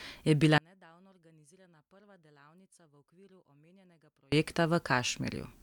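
From 0.58 to 4.32 s the speech drops by about 36 dB when summed to mono. One channel inverted is the likely cause, cancelling the centred voice.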